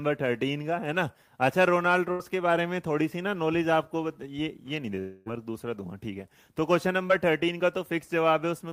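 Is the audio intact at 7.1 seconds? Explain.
No. Short concealed packet loss occurs from 7.08 to 7.11 s. About 20 ms of audio did not reach the decoder in time, and the receiver synthesised about 17 ms of replacement. It extended the preceding sound, either from its pitch if voiced or as shaped noise if not, then cross-faded back into the real signal. The result is a brief smear or wobble at that point rather than a clean gap.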